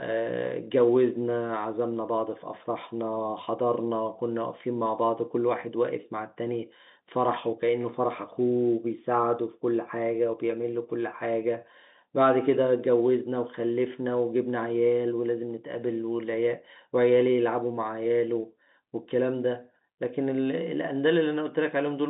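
Nothing in this speech recording points to a technical fault. The sound has the narrow band of G.711 telephone coding, running from about 150 Hz to 3.7 kHz with nothing above 3.8 kHz, and any trace the coding leaves on it is faint at most.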